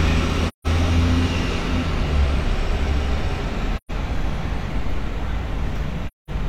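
Three soft-edged holes, at 0.48–0.67 s, 3.77–3.91 s and 6.07–6.30 s, are AAC frame loss with muting. The lengths fit roughly four, three and five lost frames. The decoder zeroed those frames, so overlapping windows fade the sound out and back in, unlike the abrupt, clicky edges of a hard dropout.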